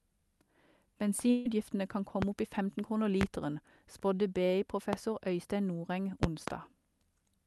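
From 1.30 to 1.46 s the speech smears into a short held, fading tone and then jumps ahead, with about 150 ms missing. This is a burst of packet loss: the receiver stretched out the last sound it had to cover the gap.

Sharp loud pops then land on top of the speech, which carries on underneath, at 2.22 s, 3.21 s and 4.93 s, and as a pair between 6.23 and 6.51 s. Each peaks roughly 20 dB above the speech, likely from an electrical spike such as a plug, static or a driver glitch.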